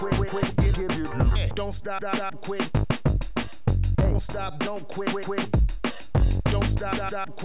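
No technical faults can be heard anywhere in the signal.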